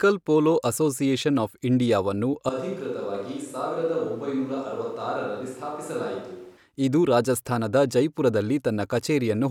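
A switch to a distant microphone runs from 2.49 s to 6.57 s, right after "ಪೋಲೋ ಅಸೋಸಿಯೇಷನ್ ಆಫ್ ಇಂಡಿಯಾವನ್ನು". The sound abruptly turns roomy and hollow, drops by about 5 dB, and the room noise rises to roughly 30 dB below the speech. The likely cause is that the close microphone's signal dropped out and a farther one, such as a camera microphone, took over. The original pickup returns just as suddenly at 6.57 s.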